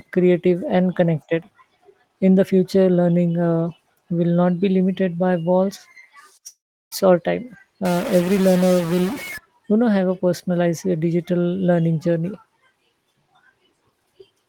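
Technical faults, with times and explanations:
6.47–6.92 s, long network dropout: the speech stops and its last sound carries on as a fading, buzzy tail, then drops to silence for roughly a third of a second before the talker comes back. About 0.44 s of speech is gone, so the return picks up mid-stream. This is likely a stretch of packets that never reached the receiver, which papered over the gap by extending what it had until it gave up.
7.85–9.38 s, stuck bit: for about a second and a half the speech turns distorted, with an error that follows the shape of the waveform. The quiet bits between sounds fill with noise too, because near zero the stuck bit's effect changes with the sign of the small values. The likely cause is a single data bit jammed at one value in the converter or the line feeding it, pushing about half the samples off by a fixed amount.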